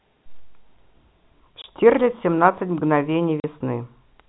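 Packet loss filled with silence cuts the speech at 1.62 to 1.64 s and again at 3.40 to 3.44 s. The 20 ms and 40 ms gaps point to one and then two lost 20 ms packets replaced by silence. Each hole has abrupt edges, heard over band-limited telephone audio.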